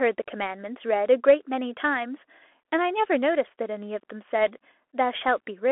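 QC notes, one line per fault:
Throughout: Bluetooth CVSD headset codec. Sound confined to 300 Hz–3.4 kHz; the spectrogram shows a hard ceiling. One-bit delta coding adds granular hiss, scratchy sibilants, and slope-overload distortion on loud high sounds.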